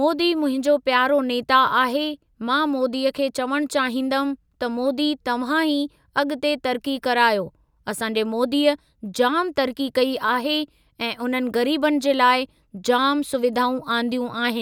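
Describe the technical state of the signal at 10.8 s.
At 10.8 s the speech signal is intact, with no audible fault at that moment.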